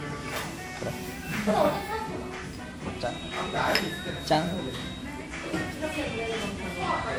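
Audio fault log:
Throughout: generation loss. The sound is swirly, smeared and hollow, with attacks blurred and nothing above 20.1 kHz. The likely cause is repeated lossy re-encoding, about ten passes, which fits WMA at 96 kbit/s. Each pass quantises on a shifted frame grid, so noise and spectral gaps accumulate.
2.94–5.12 s: feedback whistle. A thin, steady 3.8 kHz tone sits about 15 dB below the main sound and swells and fades slowly in level. The likely cause is a loudspeaker-to-microphone loop held just at the feedback threshold, sustaining one frequency without running away.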